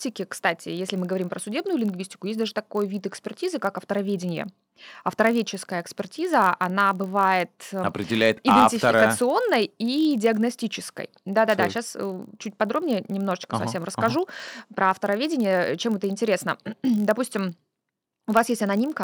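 Throughout the speech, a block size mismatch (padded) leaves a tiny zero gap in each block, producing a buzz at 46.9 Hz, which fits 1024-sample blocks at 48 kHz. Pace is 0.999 times normal. The waveform shows regular dropouts; the spectrogram shows harmonic lines spaced 46.9 Hz apart.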